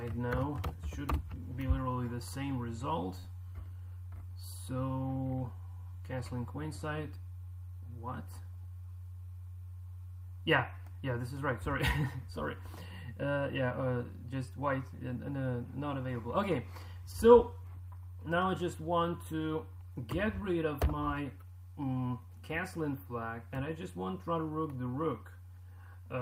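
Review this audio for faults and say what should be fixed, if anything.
At 3.19 to 3.26 s there is a short concealed packet loss: about 40 ms of audio never arrived in time, and the decoder covered the gap with roughly 41 ms of synthesised continuation before blending back into the received signal. It is heard as a brief smear. On a spectrogram the harmonics or noise there look frozen and smoothed. To prevent it, add forward error correction and a larger jitter buffer, and reduce network congestion on the link.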